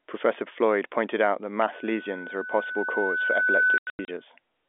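Right after "pointed out that", at 1.72 s, a loudspeaker feedback squeal starts: a steady 1.5 kHz tone that swells over roughly two seconds until it sits a few decibels above the speech, then stops at 4.25 s. The microphone is picking up the loudspeaker it drives, and at that one frequency the loop gain has passed unity, so the tone keeps feeding itself. It is a single pitch that climbs in level, not a hum or a broadband hiss, and that is what marks it as feedback rather than interference or noise.

Between 3.78 and 4.08 s, while the squeal is still sounding, there is packet loss filled with silence. About 210 ms of audio is missing, spread over 300 ms as several gaps, the longest about 90 ms. Each hole has hard edges and cuts both the speech and the tone to dead silence, which fits 30 ms packets. Concealment would smooth or repeat the sound across the holes, and here it does not. The narrow 250 Hz to 3.5 kHz telephone band carries all of this.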